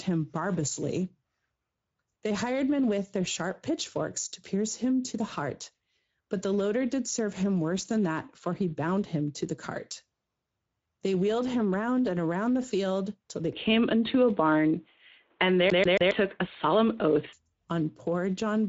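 Across the whole clip the Speex codec leaves the speech plainly hoarse and noisy. The damage is plainly audible and points to a middle-rate setting near 17 kbps. A spectrogram shows nothing above 7.7 kHz.

At 13.53 s, right after "the field till they", the sound turns dull and boxy with no gap, which likely means the input was switched to a poorer device. Level shifts by a few dB, a new noise floor sits around 45 dB down, and the spectrogram's top edge drops abruptly to 3.8 kHz until 17.33 s.

From 15.70 to 16.11 s the audio behaves like a CD stuck on one turn. The same 0.14 s slice repeats three times as a fast, even stutter. The waveform shows identical blocks in a row, and the spectrogram shows a tiled, copy-pasted pattern.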